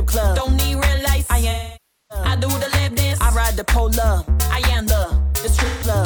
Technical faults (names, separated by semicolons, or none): AAC frame loss with concealment